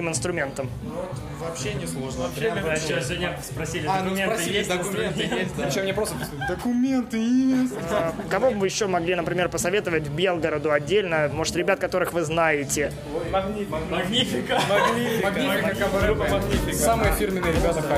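No technical faults detected.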